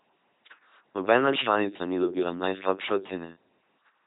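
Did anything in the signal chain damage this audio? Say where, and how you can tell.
Yes, at the codec stage: the whole clip carries heavy LPC-10 vocoder damage, consistent with a 2.4 kbit/s LPC-10 vocoder. The speech turns into a buzzy, mechanical robot voice with nothing above 3.9 kHz, because a ten-pole filter driven by pulses or noise replaces the real voice.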